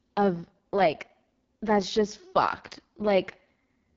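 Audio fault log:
Throughout: AMR wideband (HD Voice) codec. The speech sounds rough and raspy and has nothing above about 7.4 kHz. This is a pulse-driven vocal tract model starved of bits, which fits the lowest 6.6 kbit/s mode, with shaped noise in the top band.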